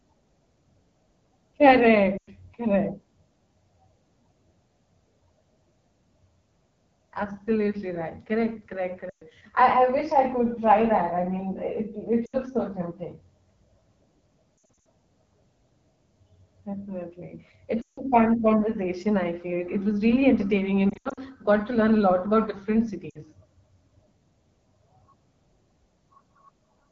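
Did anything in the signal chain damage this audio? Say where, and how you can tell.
Yes. At the codec stage, the AMR wideband (HD Voice) codec leaves everything rough and raspy throughout, which fits its low 8.85 kbit/s mode.

On the network side, there are lost AMR speech frames at 2.17, 9.09, 12.25 (just before "so tempting"), 14.84, 17.81, 20.89 and 23.09 s. Each one is a gap where the decoder reuses its last good frame with falling gain, so the sound drops to near silence within two frames and the voice comes back weak or rough for a moment.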